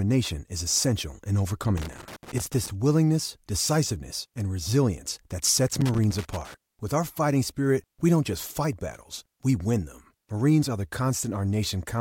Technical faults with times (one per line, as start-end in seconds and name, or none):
1.77-2.70 loose connector crackle
5.73-6.54 loose connector crackle